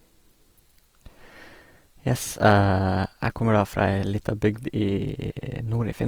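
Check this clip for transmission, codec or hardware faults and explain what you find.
One codec fault runs through the whole clip: likely Opus compression, with music-mode band filling leaving the speech rough and grainy rather than swirly like MP3, at a rate fitting roughly 24 kbps.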